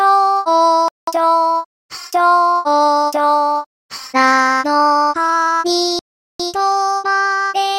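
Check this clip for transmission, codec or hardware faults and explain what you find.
Two dropouts are audible. At 0.88 s the sound cuts to silence for about 0.19 s and resumes at 1.08 s. At 5.99 s a longer gap of about 0.4 s follows, ending at 6.40 s. Both are likely a Bluetooth stall. Radio interference delays packets on the wireless link. The headphones' small buffer runs empty before the resent packets arrive. Playback simply halts, leaving a clean hole, then the sound resumes.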